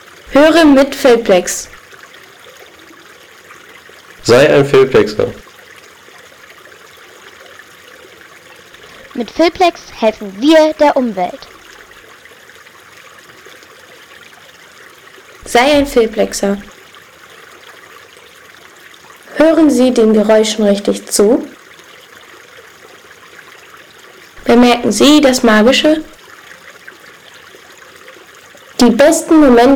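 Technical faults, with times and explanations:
Throughout, hard clipping: the signal is driven about 16 dB past what one stage can carry, so every loud moment is sliced flat, with a few percent of all samples pinned at the limit. The flattened tops generate harmonics reaching high into the spectrum, heard as a harsh fuzz riding on each loud sound. On a waveform the peaks sit as level plateaus; a spectrogram shows broadband vertical smears at those instants.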